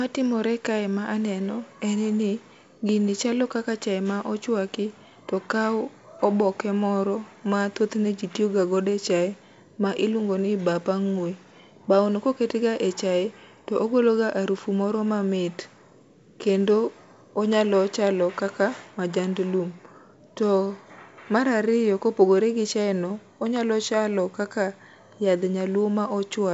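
Nothing stood out on listening to this speech, which carries the band limit of G.722 wideband telephone coding with no content above roughly 7.7 kHz.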